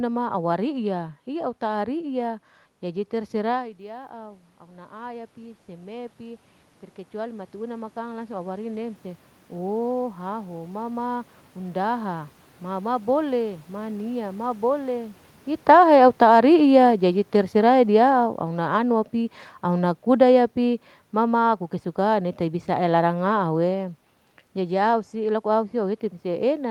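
Automatic gain rising runs from 2.82 to 6.48 s and again from 7.14 to 9.07 s. The talker moves away around 3.5 s and the input drops by about 15 dB. The gain control lifts its gain by about 7 dB and then by about 3 dB, so the voice and the room noise swell up together over several seconds.

Automatic gain falling follows from 15.54 to 19.02 s and from 19.64 to 23.75 s, after the talker shifts around 15.5 s. Judging the input too loud or its background noise too strong, the control lowers its gain by about 6 dB and then by about 4 dB. The voice and its background sink together gradually.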